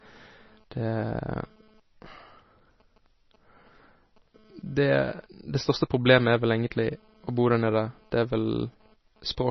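MP3 compression throughout this speech: nothing above 6 kHz, and weak components flicker between frames, sounding watery, likely from a starved encode fitting about 24 kbps.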